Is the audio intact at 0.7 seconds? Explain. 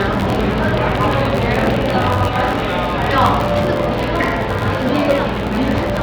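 No. At 0.7 s the audio carries two faults. The first is a filter restarted on every block, present through the whole clip. The filter loses its state at each block boundary and starts again from silence, leaving a small transient every 512 samples. These repeat at about 86.1 Hz, heard as a low, steady buzz whose loudness rises and falls with the sound itself. That rate fits a 512-sample block.

The second is a train of clicks running from 0.01 s to 2.26 s. About 15 sharp, similar-shaped pops arrive at a regular 5.34 per second, standing well above the sound and audible in its quieter moments. They are likely caused by interference from nearby equipment or a faulty connection or power supply. The two differ in rate and behaviour: the clicks are distinct ticks a few times a second that stop after 2.26 s and don't follow the sound's level, while the restart artefact is far too fast to hear as separate ticks, so it fuses into a buzz that tracks the level and continues throughout.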